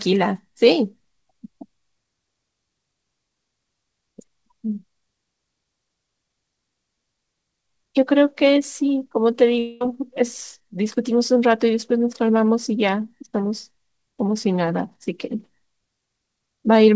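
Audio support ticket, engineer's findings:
Audio gap 9.59–9.82 s, concealed by a buzzy fade; likely long network dropout, about 220 ms missing. Spectrogram shows a smeared, decaying band with no clean silence. Energy above 8 kHz is absent throughout, consistent with the G.722 call path.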